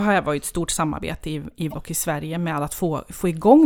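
At 1.69 s to 1.74 s, damaged data in the compressed stream interrupts the speech for about 56 ms. Corrupted bytes make the decoder misread those frames and lose sync until it finds a valid frame header, producing a brief chirp or blip.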